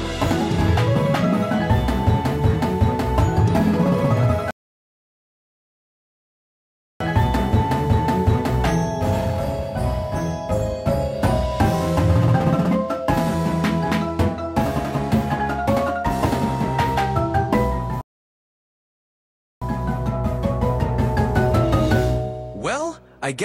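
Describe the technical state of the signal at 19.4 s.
At 19.4 s the player is in the middle of a rebuffering stall: it exhausted its downloaded audio and paused playback while waiting for more data to arrive. The stall runs from 18.01 s to 19.62 s, so the signal at this moment is silence. When data returns, playback resumes at exactly the point where it stopped. No audio is skipped, but the gap adds about 1.6 s to the clip's running time.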